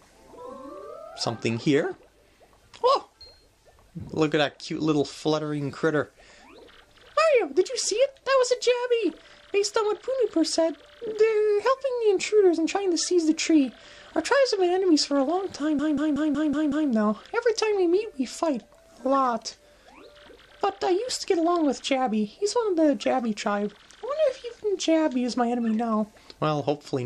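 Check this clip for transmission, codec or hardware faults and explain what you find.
There's one clear fault, a system hang loop from 15.79 to 16.90 s. The system stalled while the hardware kept replaying its ring buffer, so a roughly 186 ms slice, which fits an 8192-sample buffer, repeats six times at about 5.4 Hz: a choppy, machine-gun stutter.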